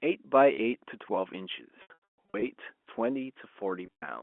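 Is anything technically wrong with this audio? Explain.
Yes. At 1.82–2.42 s and 3.86–4.02 s the speech turns buzzy and held, then dips out. This is packet loss with pitch repetition: the receiver loops the last pitch period to cover the missing audio.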